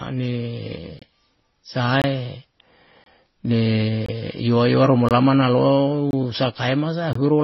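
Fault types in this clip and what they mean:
Transcoding between lossy codecs: speech carrying the artefacts of several codecs heard together, with nothing above 5.8 kHz, likely from several lossy stages stacked, unlike a single codec's cleaner, uniform artefacts.
Gap between chunks: 23 ms silences roughly every second, one just after "ru mu"; unlike dropouts, no speech is lost, only interrupted at joins.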